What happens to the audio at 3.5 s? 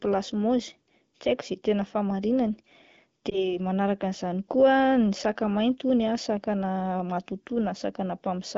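At 3.5 s the audio is inside a lost AMR speech frames event running from 3.30 to 3.58 s. The affected stretch is 20 ms, which points to a single lost frame. After radio errors made the frame fail its checksum, the AMR-WB decoder filled the gap by repeating the previous pitch and vocal-tract parameters at reduced gain. The result is a brief dip or warble, after which the wideband speech recovers weak or rough for a moment.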